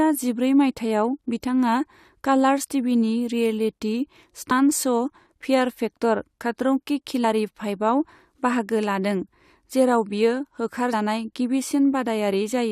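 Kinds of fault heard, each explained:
Compressed frames skipped: whole frames of the compressed speech never reach the output, so the audio jumps forward by a multiple of the 21.3 ms frame length. At 4.5 s and 7.23 s roughly 40 ms goes missing, which fits about two frames. At 10.92 s the gap is nearer 100 ms.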